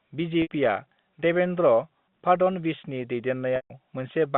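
Packet loss with pitch repetition occurs twice, at 0.42 to 0.50 s (80 ms lost) and 3.56 to 3.70 s (140 ms lost). The receiver bridged each gap by repeating the last pitch period, giving a held, buzzy tone that fades out. The longer gap drops into silence before the speech cross-fades back.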